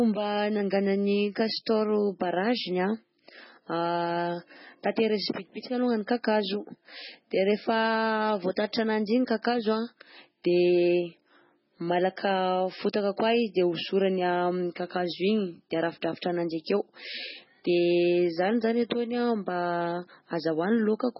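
From start to finish the speech carries heavy codec damage, likely from MP3 compression. Nothing reaches above 5.6 kHz, so the top of the sound is cut flat and s sounds lose their edge. Weak frequency lines drop in and out between frames. That gives a watery, swirling texture with metallic chirps. Attacks are smeared. The encoder starved for bits and discarded detail, which fits a very low bitrate near 16 kbps.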